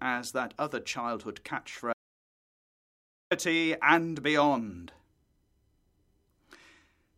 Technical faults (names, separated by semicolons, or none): audio dropout to silence